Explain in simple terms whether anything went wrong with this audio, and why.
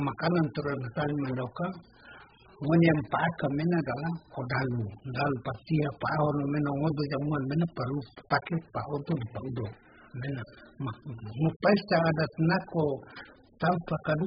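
AAC compression damage runs through the whole clip, from 0 to about 14 s. The speech sounds dull and muffled, with nothing above 5 kHz, and has a smeared, warbling texture. The likely cause is heavy AAC squeezing, which discards detail to shrink the file.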